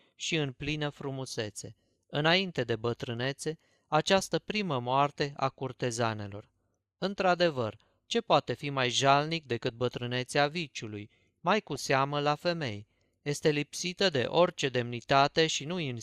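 Speech, with brief burbling at 9.67–9.70 s, after "poate fi mai jalnic", and at 11.75–11.89 s, before "la femei". This is DAB burbling: weak reception lets bit errors, around 0.2 and 0.15 percent, slip past error correction, so corrupted sub-band samples add short blips of noise and corrupted scale factors make sub-bands jump in level for up to a frame.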